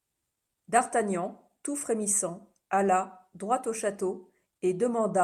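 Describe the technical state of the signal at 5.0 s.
At 5.0 s the speech signal is intact, with no audible fault at that moment.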